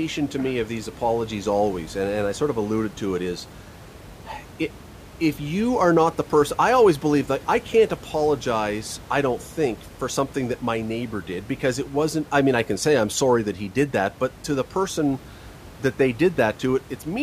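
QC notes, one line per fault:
No faults found; the room's background noise sits about 20 dB below the speech.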